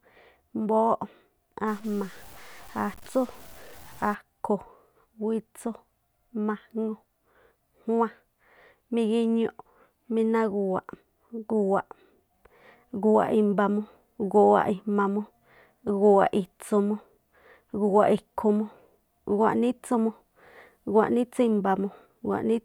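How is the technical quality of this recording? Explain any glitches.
The recording has one clear fault, a stretch of low bit depth without dither from 1.68 to 4.15 s. The speech turns grainy, and the grit rises and falls with the voice, fading into sputtering or dead silence in the quietest gaps. This is likely coarse truncation, consistent with about 7 bits, leaving the error only about 25 dB below the signal. On a waveform the quiet parts show visible stair-steps. A spectrogram shows broadband hash that tracks the speech energy.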